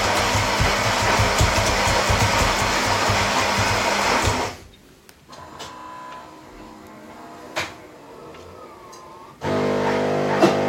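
No technical faults are audible.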